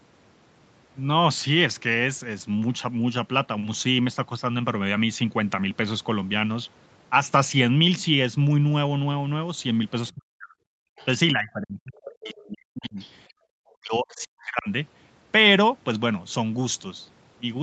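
From 10.15 to 10.62 s the echo canceller, likely caught in double talk, could not tell the near talker from the loudspeaker echo and turned everything down. This is speech suppressed in double talk: the speech sinks very deeply, around 40 dB, for about half a second. At 10.9 to 10.96 s the canceller clamps the microphone while the loudspeaker plays, so the background is gated by the echo canceller. The room sound drops by about 37 dB for roughly 70 ms and then returns.

Right after, from 10.96 to 11.05 s, the other side's voice leaks through because the echo was likely not fully removed. It is a brief, faint scrap well below the speech level. The same double-talk suppression returns from 11.33 to 12.99 s, with about one and a half seconds of speech pushed down or cut in pieces. Within that stretch, more leakage surfaces at 12.24 to 12.41 s, somewhat louder at roughly 20 dB under the speech. 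Another faint scrap follows at 12.83 to 13.12 s.

Finally, from 13.47 to 14.68 s, double talk likely again defeats the canceller. About a second of speech is suppressed, dipping up to roughly 40 dB and breaking up.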